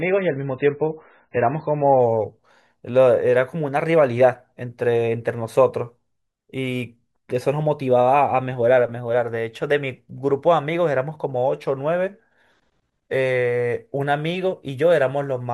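For the first 2.0 s the speech sounds thin and muffled, with nothing above about 4.5 kHz and stronger codec artefacts, then clears abruptly with no gap. This is an adaptive stream starting at a low bitrate: it opens on a roughly 16 kbit/s MP3 version, then steps up to a 128 kbit/s one.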